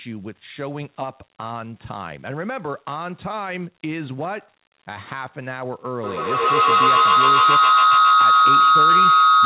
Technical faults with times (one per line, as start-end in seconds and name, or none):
6.04-9.45 feedback howl